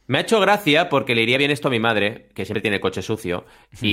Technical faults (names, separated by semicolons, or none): compressed frames skipped